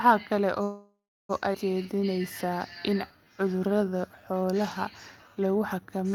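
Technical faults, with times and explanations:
0.63–1.31 s, call audio freeze: the sound stalls, the last moment trails into fading noise, then silence for about 0.33 s. Likely delayed packets emptied the jitter buffer; nothing lost.
1.53 s, skip ahead: playback jumps forward with almost no gap. Roughly 0.4 s of speech is dropped, and the two sides join directly.
1.83–5.99 s, jitter buffer slow-down: speech runs at 90% speed, same pitch, drawn out. Repeated pitch periods add 0.44 s to rebuild the buffer reserve.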